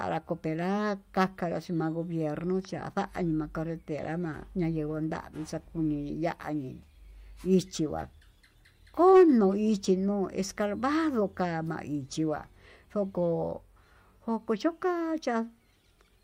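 No technical faults can be heard anywhere in the speech.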